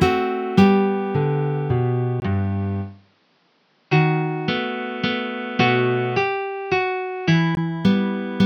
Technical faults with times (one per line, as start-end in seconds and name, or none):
2.20-7.57 input switched to a poorer device